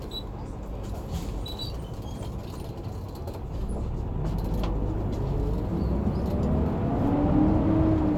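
No technical faults can be heard anywhere in this recording of sounds. There is nothing in the audio that calls for a time, a value or a cause to be given.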